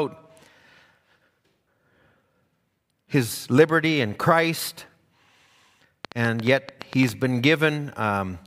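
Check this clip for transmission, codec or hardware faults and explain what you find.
One fault is audible. A train of clicks from 6.05 to 7.10 s: about ten similar pulses, roughly 8.6 per second at an uneven pace, most likely interference or a faulty connection, ticking about 10 dB above the speech.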